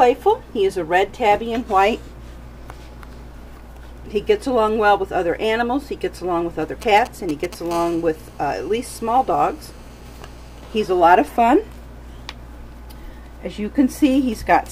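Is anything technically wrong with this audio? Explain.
Yes, there's mobile phone interference in two stretches, both from a 2G handset somewhere near the audio gear.

From 6.82 to 7.55 s you get GSM signalling bursts. The phone is only sending short clusters of radio bursts, the kind it fires off while setting up a call or text. The audio circuitry rectifies those pulses, so you hear a galloping dit-dit-dit of brief buzzes at about 217 Hz, around 15 dB under the wanted sound.

Then from 7.71 to 10.85 s it turns into a steady GSM phone buzz. Now the handset is in a call and transmitting continuously in bursts 216.7 times a second. The same rectification turns that pulse train into a hard, raspy 217 Hz drone packed with harmonics, completely unrelated to the material underneath. It's quieter than the earlier bursts, at about 26 dB below the signal, but it runs unbroken for just over three seconds.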